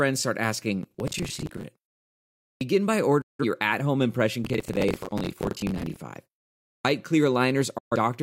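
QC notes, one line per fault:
0.83–1.63 s and 4.44–5.96 s, processor overload crackle: the processor falls behind and misses buffer deadlines many times in a row. The pattern fits buffers of roughly 10 ms, with dozens missed in the first burst and many more in the second. Each missed slot replays a scrap of old audio with hard edges, so a gritty, tearing crackle rides over the sound just after "start asking" and again after "your at home impression", stopping when the load eases.
2.56–2.61 s and 6.80–6.85 s, clipped start after a pause: during the silences before these points, about 0.87 s and 0.6 s long, the output device drops into sleep. It then needs time to wake and lock again, so the opening of the next sound is swallowed, roughly 50 ms and 48 ms. Each phrase therefore jumps abruptly out of silence with its first sounds missing, instead of beginning naturally.
3.21–3.44 s and 7.78–7.96 s, digital broadcast dropout: the receiver loses the digital stream, or frames fail their checksum, and it mutes until valid frames come back. 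The losses fit about four frames and then three. Each time, the sound fades out over about 8 ms into a hole of about 171 ms and then 128 ms. The first hole falls just before "your at home impression", and the audio carried in both gaps is simply gone.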